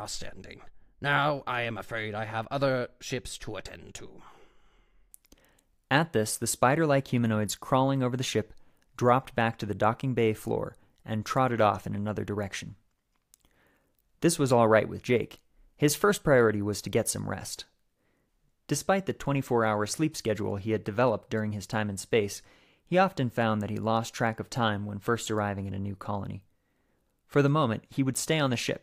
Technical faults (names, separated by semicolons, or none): none